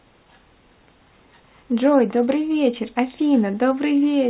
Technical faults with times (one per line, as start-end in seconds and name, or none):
none